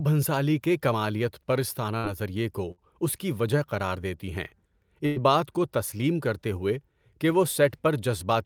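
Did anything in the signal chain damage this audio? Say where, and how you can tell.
Yes, in the network stage: bursts of packet loss at 1.97–2.05, 2.71–2.80 and 5.06–5.18 s. Each gap is concealed by a fading extension of the preceding sound, and about 60, 60 and 100 ms of speech are lost.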